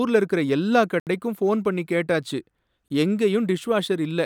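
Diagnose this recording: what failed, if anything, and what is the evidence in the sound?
Unfilled buffers at the driver stage. Blocks of digital silence hit 1.00–1.07 s and 2.88–2.90 s. The second fits a 1024-sample buffer.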